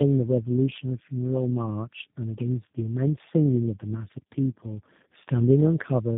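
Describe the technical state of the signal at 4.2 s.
At 4.2 s the speech is inside a playback stall running from 4.18 to 4.32 s. Output drops to silence mid-flow and then resumes. A gap like this most likely comes from the player running short of buffered data, or its output thread being blocked, so nothing reaches the converter until it catches up.

The same moment also carries tandem speech coding, present across the whole clip. Nothing is audible above 3.6 kHz, and the speech sounds rough, muffled and warbly. That fits the signal being decoded and re-encoded through three low-rate speech codecs in sequence, ending with one that sounds like G.729A, with G.711 hops between them. Each coder degrades the previous coder's output further, so the artefacts compound.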